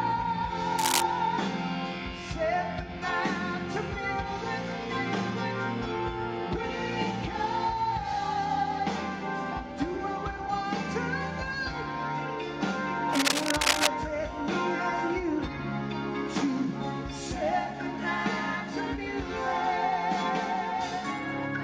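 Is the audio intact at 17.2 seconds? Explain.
Yes, the audio is intact at 17.2 seconds, with no fault audible at that point.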